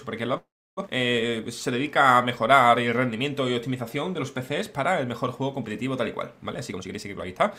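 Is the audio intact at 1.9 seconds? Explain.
Yes, the audio is intact at 1.9 seconds, with nothing there to break its continuity.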